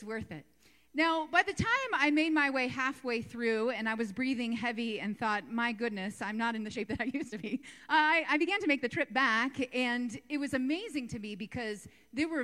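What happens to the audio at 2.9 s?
Nothing goes wrong at 2.9 s: the audio plays through that moment intact, with no dropout, click, distortion or other audible fault.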